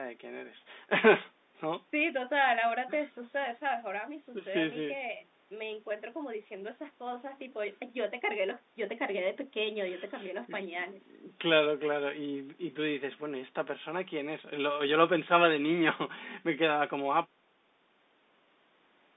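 No technical faults can be heard in this recording.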